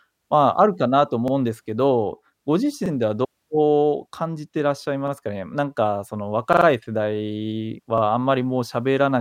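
Repeated buffer at 1.28, 2.86, 5.08, 6.53 to 6.66 and 7.98 s: late audio made the device replay its last 43 ms block, fitting a 2048-sample buffer, giving brief stutters, three repeats at 6.53 s.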